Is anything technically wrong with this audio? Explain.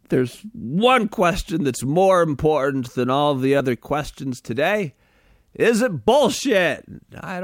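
Yes. Audio missing between chunks at 1.12, 3.60 and 6.08 s: the speech likely loses about 20 ms at each 2.5 s chunk boundary, so it skips abruptly with no gap.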